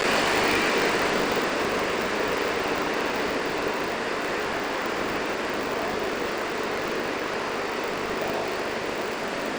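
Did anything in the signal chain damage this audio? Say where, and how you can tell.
Yes, at the driver or buffer stage: buffer tearing runs through the whole clip as a steady 50 Hz rattle that is present only while sound is playing. That rate points to 20 ms periods. Writer and reader pointers have crossed, so roughly two fifths of each period replays audio about 40 ms stale, with hard joins.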